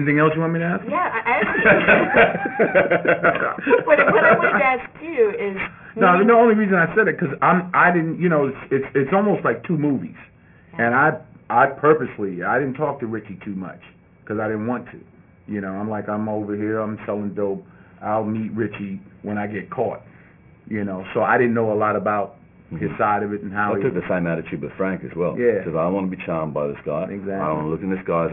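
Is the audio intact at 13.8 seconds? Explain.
No. Aliasing runs through the whole clip, including 13.8 s. Content above 3 kHz folds back as false, gritty tones, which fits an unfiltered drop to a 6 kHz rate.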